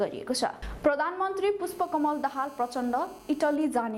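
From 1.70 s to 3.56 s a hard, raspy buzz sits under the sound, pitched at about 217 Hz and thick with harmonics, steady throughout and about 27 dB below the signal. This is GSM phone buzz: a 2G phone in a call nearby transmits radio bursts 217 times a second, and the audio circuitry rectifies those pulses into a tone that bears no relation to the wanted audio.

From 3.61 s to 3.91 s the steady buzz gives way to even ticks with a longer 217 Hz buzz twice a second, roughly 30 dB below the signal. These are GSM signalling bursts. The phone is still in its call but its user has gone quiet, so it sends only short groups of bursts instead of continuous transmission. The same rectification turns each group into a tick or a longer buzz.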